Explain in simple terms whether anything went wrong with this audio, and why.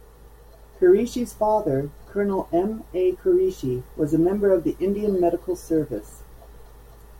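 Nothing audible went wrong here.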